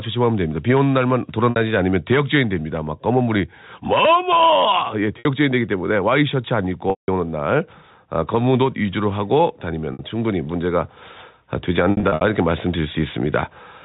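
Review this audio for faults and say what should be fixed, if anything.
The input gain is set far too high, and a fast limiter is likely pulling it back on every loud syllable. The gain swings by around 5 dB, so the level pumps and the dynamics sound squashed. Lowering the microphone gain so the limiter rarely engages would prevent this.

Packet loss with pitch repetition occurs where audio went missing and the receiver filled each gap by repeating the last pitch period. The 60 ms gaps at 1.50–1.56 s, 5.19–5.25 s and 9.93–9.99 s come out as a briefly held, buzzy tone. The 180 ms gap at 6.90–7.08 s fades toward silence before the speech cross-fades back. A scattered 180 ms of losses across 11.91–12.21 s, none longer than 60 ms, each come out as a briefly held, buzzy tone. A more stable network path with a larger jitter buffer, or forward error correction, would prevent these dropouts. The G.711 telephone band is audible throughout, with nothing above 4 kHz.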